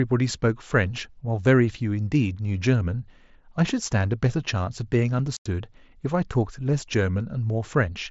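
At 5.37 s the speech drops out for about 90 ms, until 5.46 s, an unconcealed Bluetooth headset packet loss. The wireless voice link between headset and phone lost a run of its short packets, which fits roughly a dozen consecutive ones, and nothing filled the gap, so silence replaced them. It sounds like a brief hole with hard edges. On a waveform it shows as a flat stretch; on a spectrogram, a vertical blank band across the full mSBC wideband range.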